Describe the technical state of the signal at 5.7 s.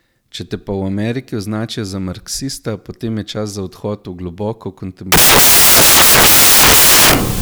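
At 5.7 s you're right in the middle of a stretch of samples built from the wrong bytes, which runs from about 5.12 s to the end of the clip. The reader has lost track of how each sample's bytes fit together, so the fast-flickering low-order bits end up as the dominant part of every value. What you hear is loud, harsh broadband noise, close to white on the louder sounds.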